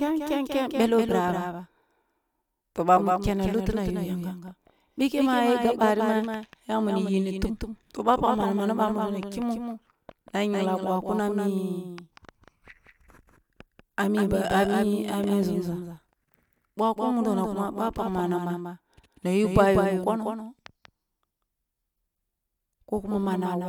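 A doubled audio track runs throughout this speech: a second, full-band copy trails by roughly a fifth of a second, about 5 dB quieter, likely from a slower duplicate capture path.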